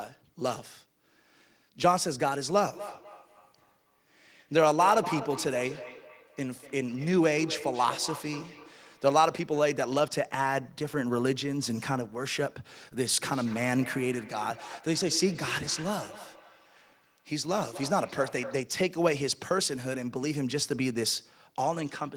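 From 2.73 to 9.26 s, and again from 13.09 to 18.77 s, there is feedback echo between two devices. A second device replays this microphone's sound, which is picked up again. Speech returns about every fifth of a second, at most about 11 dB and then about 15 dB below it.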